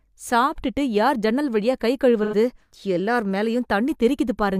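At 2.23 s, just after "யார் ஜன்னல் வழியா கை", the decoder hits AAC frame loss with concealment: roughly 85 ms of coded audio never arrives, about the span of two AAC frames, and the decoder patches the gap by reusing the last good spectrum with altered phase and energy. Until 2.34 s the speech turns smeared and noisy, with a hollow, phasey quality where clear articulation should be, before normal speech resumes.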